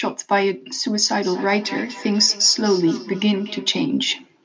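Speech, with feedback echo between two devices from 1.0 to 3.92 s: the sound keeps returning roughly every fifth of a second, peaking about 15 dB below the voice, as a second device in the room replays it into the microphone.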